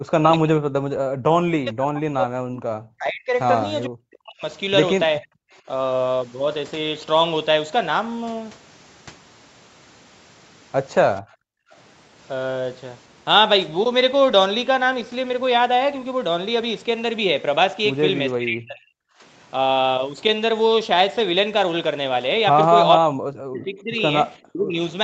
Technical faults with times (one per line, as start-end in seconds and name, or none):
0.00-0.72 speech suppressed in double talk
1.16-3.34 speech suppressed in double talk
3.86-4.44 speech suppressed in double talk
5.20-5.28 speech suppressed in double talk
11.22-11.72 background gated by the echo canceller
18.38-18.98 speech suppressed in double talk
22.97-24.02 speech suppressed in double talk
24.48-24.76 speech suppressed in double talk